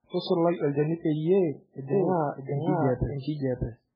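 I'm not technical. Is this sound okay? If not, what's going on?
No. Throughout, the speech sounds watery and swirly with a dull top, nothing above about 5.2 kHz, which points to heavy MP3 compression, likely from a very low-quality save.

From 1.93 s to the end, there is a doubled audio track: a second, roughly equally loud copy trails about 0.7 seconds behind, likely from an out-of-step edit. Unlike a room echo, it never fades away or sounds roomy.

Pre-echo appears from 3.19 to 3.25 s: a brief hiss comes just before a sharp sound rather than after it, and that sound's attack seems softened.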